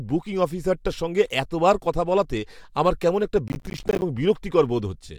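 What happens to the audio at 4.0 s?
At 4.0 s the speech is coming to the end of a burst of gritty, tearing crackle that began at 3.48 s and clears at 4.02 s. This is processor overload crackle: the processor fell behind on its small audio buffers, which sound to be around 10 ms each, and missed roughly twenty deadlines in that stretch. Each miss dropped a sliver of silence with hard edges into the speech, and the run of these tiny cut-outs produces the crackle.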